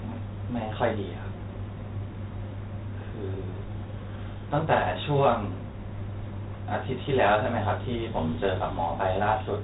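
Throughout, 4-bit ADPCM compression leaves gritty hiss riding every loud syllable and smeared attacks; nothing above 3.9 kHz, consistent with roughly 32 kbps at 8 kHz sampling.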